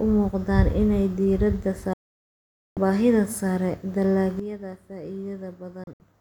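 At 1.93 s, after "u muuqdaan inay diiradda", a digital broadcast dropout mutes the speech with a 3 ms fade for 0.83 s, resuming at "baahida sare". The receiver lost valid frames, so that content is gone.

At 4.40 s a sudden gain jump drops speech and background together by about 12 dB until the end, likely an unramped digital gain change.

A second dropout, from 5.84 to 6.00 s, leaves two short holes totalling 96 ms, the longest 64 ms.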